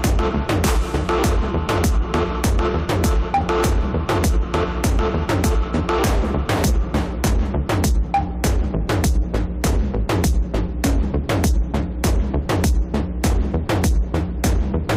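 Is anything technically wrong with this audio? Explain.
No, nothing in this audio points to a technical fault.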